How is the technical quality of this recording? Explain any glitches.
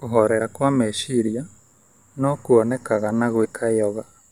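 The speech has two brief dropouts caused by compressed frames skipped. The first is at 0.40 s, just before "kwa meciria". The second runs from 3.44 to 3.46 s, just after "no kwonekane na". Each time, the decoder loses about two frames of about 23.2 ms each. So roughly 50 ms of audio disappears and the speech jumps forward.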